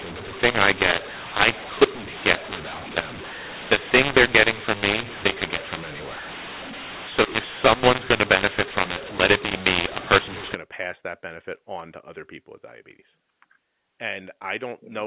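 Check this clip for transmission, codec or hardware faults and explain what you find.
One codec fault is present: a mu-law and A-law mix-up covering the first part of the speech, on top of a G.711 telephone channel whose content stops at 4 kHz.

From 0.0 to 10.55 s, just before "to pass that benefit", the signal was encoded with A-law but decoded as mu-law. The two logarithmic curves map each 8-bit code to different amplitudes, so levels come out scrambled, some too loud and some too soft. Low-level samples are raised well above silence, which fills the pauses with noise. The speech sounds distorted.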